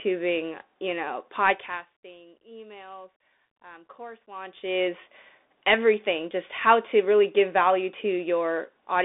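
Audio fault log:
throughout, Bluetooth CVSD headset codec: the speech is squeezed into a narrow telephone band of roughly 300 Hz to 3.6 kHz, with nothing above 3.8 kHz, pointing to a 64 kbps one-bit delta stream whose adapting step can't keep up, leaving scratchy s sounds and granular hiss.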